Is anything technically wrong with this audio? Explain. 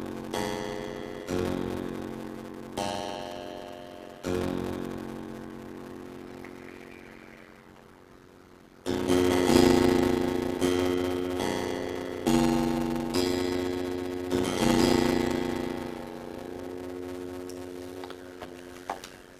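Yes. A block size mismatch (padded) runs throughout: short blocks, which fits 256 samples, are zero-padded, causing a 91.9 Hz buzz and playback at 0.533 speed, timbre unchanged.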